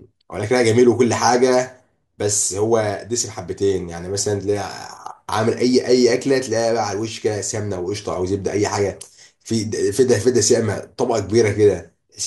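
No technical faults can be heard anywhere in this speech recording.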